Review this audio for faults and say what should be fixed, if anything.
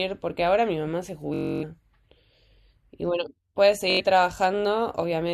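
Bluetooth stutter at 1.34 to 1.64 s and 3.90 to 4.01 s. Packets went missing, so a short slice repeats as a buzz. Speech resumes later, skipping ahead. Keep the source close to the receiver and clear of interference so packets arrive on time.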